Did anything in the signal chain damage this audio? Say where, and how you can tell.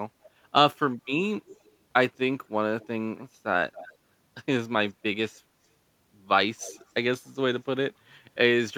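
Yes. Faint, delayed copies of the speech surface at 1.48–1.72, 2.81–2.88, 3.73–3.94, 4.87–4.91 and 6.59–6.91 s, each trailing by about 0.27 s and some 20–30 dB down. This echo leak is likely call processing: a loudspeaker end's echo canceller passed residual pickup back.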